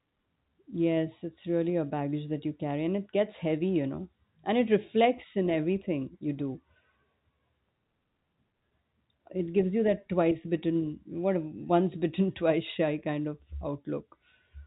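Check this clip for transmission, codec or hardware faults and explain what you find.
No transmission, codec or hardware faults are audible here.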